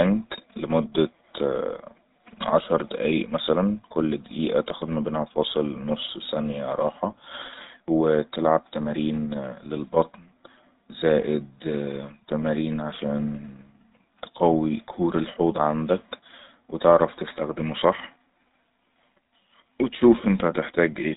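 Speech, coded throughout with the GSM full-rate codec, which fits a 13 kbps full-rate link. Nothing above 4 kHz survives, and the regular-pulse excitation, keeping only every third sample, leaves a plainly audible buzzy, gravelly roughness across the whole recording.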